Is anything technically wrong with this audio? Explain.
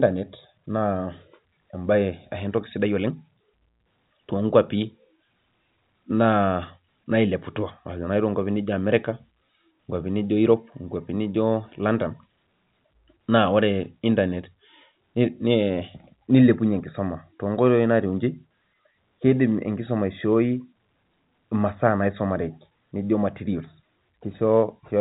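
No, nothing is technically wrong.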